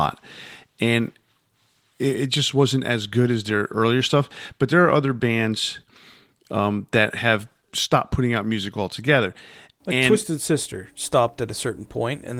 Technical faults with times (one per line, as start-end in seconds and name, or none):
none